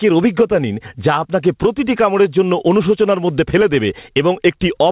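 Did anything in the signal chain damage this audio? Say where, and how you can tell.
Yes. The damage is gain pumping, most likely from input gain set far too high at the microphone stage, with a fast limiter or compressor clamping it on every loud syllable. Throughout the speech, the gain swings by around 15 dB. On the waveform, peaks sit flattened at a near-constant ceiling. On the spectrogram, the signal sits inside a band that stops at 4 kHz from the G.711 call codec.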